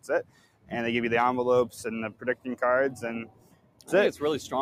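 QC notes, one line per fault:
Throughout: noise suppressor applied to music or sounds. Held tones and tails are treated as noise, so the level swings by roughly 15 dB. Attacks survive, unlike a dropout.
0.23–0.72 s, 2.11–2.46 s, 3.25–3.90 s: sound cut by the noise suppressor. Sustained parts sink by about 16 dB and decays shorten while onsets mostly come through, which is unlike a compressor reacting to loudness.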